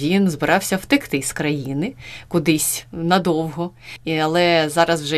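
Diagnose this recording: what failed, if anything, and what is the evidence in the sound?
Nothing failed; the speech has no audible fault anywhere.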